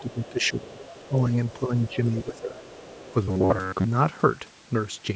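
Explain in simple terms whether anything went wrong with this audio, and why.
Yes, several things went wrong in this speech.

A faint second voice sits underneath from 0.0 to 1.0 s, briefly at 1.48 to 1.53 s, and again from 1.86 to 3.14 s. This is the other side's voice leaking through, likely because their audio played from a loudspeaker and got back into the microphone.

The main voice dips and thins out from 0.0 to 1.15 s and from 1.53 to 2.59 s, while that other voice is present. This is speech suppressed in double talk: the echo canceller likely couldn't separate the two and turned both down.

From 3.24 to 3.86 s the voice turns into a rigid, metallic buzz at about 94 Hz. This is robotic sound from repeated short buffers. Audio likely arrived late, so most of that stretch was filled by replaying a tiny slice roughly every 11 ms.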